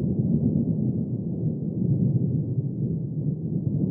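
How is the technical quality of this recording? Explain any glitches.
Nothing stood out as a technical problem on listening to this recording.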